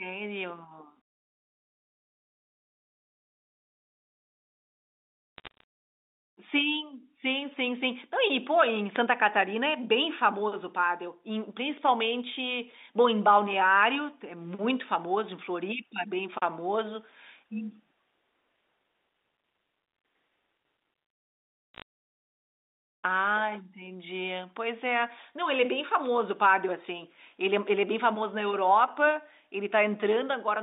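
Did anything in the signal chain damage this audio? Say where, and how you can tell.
Yes. Two short bursts of sharp ticks and crackle sit over otherwise unbroken speech, from 5.38 to 5.64 s and from 21.74 to 21.82 s. This is bit errors on a digital phone line, damaged in transmission over the network rather than in the G.711 mu-law coding, whose 250 Hz to 3.7 kHz band sounds intact. At a few flipped bits in a thousand, each error corrupts one logarithmic sample, and hits on sign or high-order bits become the clicks heard.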